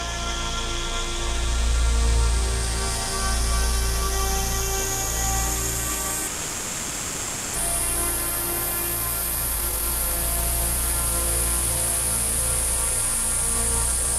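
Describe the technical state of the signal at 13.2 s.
At 13.2 s the signal is inside a jitter buffer speed-up that runs from 11.38 s to 14.08 s. The receiver's buffer had built up more audio than its target, so it trimmed short slices of one or a few pitch periods, over and over, to catch up. Across the span this removes around 50 ms in total. Playback runs at about 102% speed while the pitch stays unchanged.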